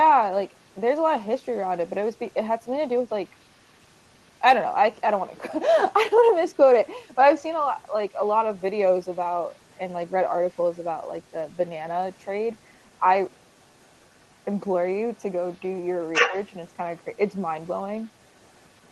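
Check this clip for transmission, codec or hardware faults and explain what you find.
Two faults stand out in this speech: echo from the far end and a brief double-talk dip.

Other side's voice leaking through, at 0.47–0.81, 1.56–4.41, 5.23–5.93, 7.12–7.16 and 7.76–18.91 s: a faint second voice sits roughly 35 to 40 dB under the talker, likely loudspeaker echo the canceller missed. It is a separate voice, not room reverb.

Speech suppressed in double talk, at 16.28–16.35 s: the talker's level drops by around 10 dB for about 70 ms, likely the canceller ducking both voices at once. The talker's own level falls, whereas leakage adds a voice.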